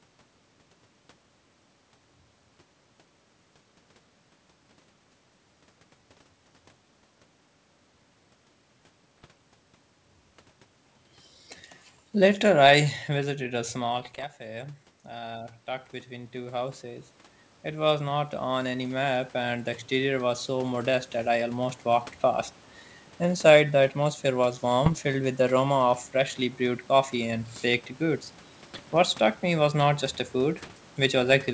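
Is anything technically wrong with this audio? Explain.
Yes. There are three kinds of fault: bit errors on an ADPCM link, automatic gain falling, and automatic gain rising.

Bit errors on an ADPCM link occur at 9.18 to 9.26 s, 13.96 to 14.25 s, 24.85 to 24.99 s, 28.74 to 28.97 s, and 30.54 to 30.78 s. The 24.85 s burst falls between "the atmosphere was" and "with the aroma". The 28.74 s burst falls between "coffee and baked goods" and "struck me was not". The coding fits a G.722 link. A few tenths of a percent of bits arrive flipped. Each flip corrupts the decoder's step size and prediction, so the damage lingers briefly. You hear pops and rough, gritty bursts with short jumps in level.

Automatic gain falling runs from 12.15 to 13.27 s. The gain control judges the input too loud. It pulls its gain down gradually, by about 5 dB. The sound starts loud and then sinks over roughly a second. 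The background sinks with it, which shows the change is in the gain, not the source.

Automatic gain rising runs from 13.48 to 21.86 s and ends just before "walked past". At about 13.5 s the talker moves away, and the input drops by about 16 dB. The control then slowly raises its gain by about 16 dB to compensate. Over those eight seconds the sound and its room background swell together. The level creeps back up rather than recovering at once.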